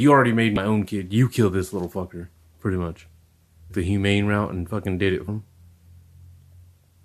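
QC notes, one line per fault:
0.56 s, 3.69 s and 5.27 s: damaged data in a compressed stream. Corrupted frames make the decoder misread them and lose sync, leaving short glitches in the speech.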